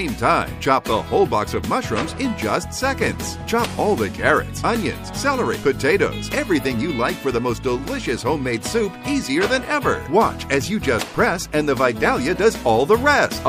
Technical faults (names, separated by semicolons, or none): MP3 compression; corrupt frame decoded